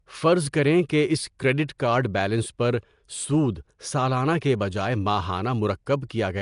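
From start to finish the speech carries a rough, hissy halo and a smeared, underwater quality, with plainly audible codec damage and nothing above 10.6 kHz. The likely cause is Nellymoser compression, the old Flash microphone codec, at a rate that fits about 44 kbps. It codes short blocks with a fixed, small bit budget, so quieter bands get no bits and are filled with noise, and the transients blur across each block.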